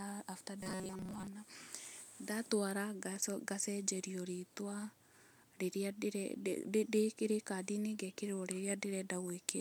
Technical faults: robotic sound from repeated short buffers

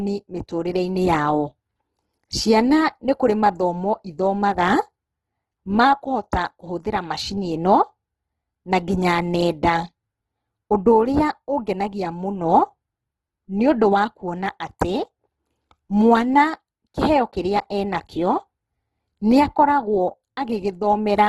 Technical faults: Opus compression

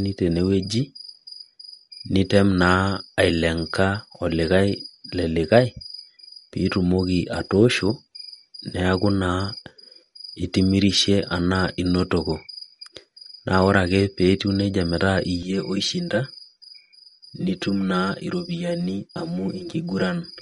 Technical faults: MP3 compression; channel delay (comb filtering)

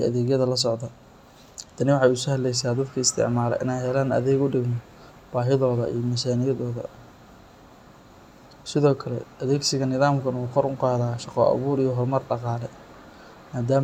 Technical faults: none

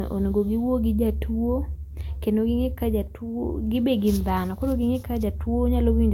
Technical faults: low-bitrate audio saved at a high bitrate

